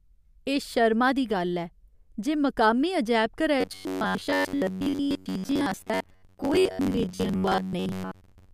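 A speech recording that, from 3.61 s to the end at 8.53 s, collapses into a rigid, metallic buzz near 93.8 Hz that only loosely tracks the talker. That is robotic sound from repeated short buffers, likely audio arriving too seldom, so a roughly 10.7 ms slice is looped for most of that stretch while the real signal is skipped.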